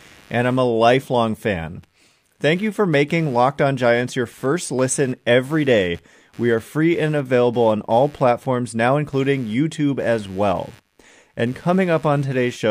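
Throughout the speech runs computer activity noise: a faint buzzing at roughly a hundred pulses per second, well below the voice. Processor or graphics load disturbs the shared audio ground, so the buzz rises and falls with the computer's activity, unlike steady mains hum.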